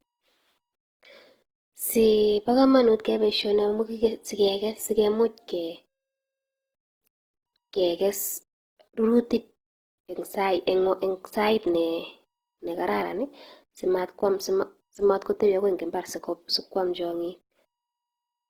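Opus compression damage runs through the whole speech clip. The cause is likely Opus working in its CELT mode. When bits run short, it keeps each band's energy but refills the fine detail with folded copies of lower bands or with noise. The damage is plainly audible. Speech sounds rough, grainy and noisy rather than swirly. The bandwidth stays full, reaching up to 20.2 kHz. The damage fits a low bitrate near 16 kbps.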